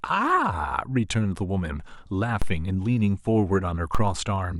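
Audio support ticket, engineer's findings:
DC step at 2.42 s and 3.95 s: probably a converter offset jump of about -14 dBFS, decaying through a 2 Hz high-pass. Each is a low thump under unchanged speech.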